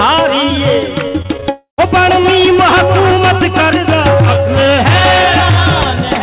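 From 1.08 to 1.44 s, packets repeatedly failed to arrive in time, and the receiver covered each hole by stretching the sound it had last decoded. This is repeated packet loss, with the robotic sound typical of concealment. Five gaps fall in this stretch, the longest about 62 ms, and together they add up to roughly 140 ms. About 39% of that span is synthesised rather than real. It comes out choppy, with pieces of the sound missing.

Straight after, from 1.50 to 1.80 s, comes what is likely a long network dropout, with no audio getting through for roughly 280 ms. The receiver first extends the last sound into a buzzy or hissy tail that fades away. About 120 ms of this interval is plain silence. The audio then resumes, but the lost portion never returns. Through all of this the band stops at 4 kHz, which fits the 64 kbps G.711 A-law call codec.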